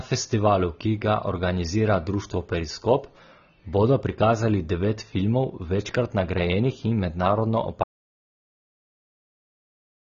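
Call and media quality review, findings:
AAC compression, whole clip: speech dull and smeared, nothing above 6.9 kHz, sibilants fizzy and warbling. Likely a low-rate AAC-LC encode, roughly 24 kbps by the sound, where the coder drops the top band and quantises the rest coarsely.

Audio dropout to silence, 7.84 s through to the end: speech cuts mid-flow to silence with no room tone. Likely the input feed lost while the encoder kept writing silence, so that tail's content is gone.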